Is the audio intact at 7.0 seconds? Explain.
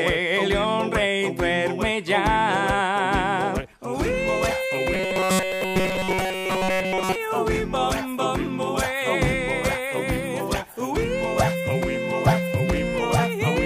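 No, 7.0 s falls inside a stretch of robotic sound from repeated short buffers running from about 4.94 to 7.16 s. You hear a stiff, metallic buzz pinned at 188 Hz that still loosely tracks the sound underneath. That's likely the playback running short on fresh audio and looping a tiny slice, around 5.3 ms, over and over. Most of the real material in that window gets skipped.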